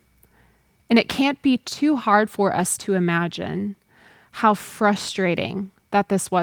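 No technical faults can be heard anywhere in the recording.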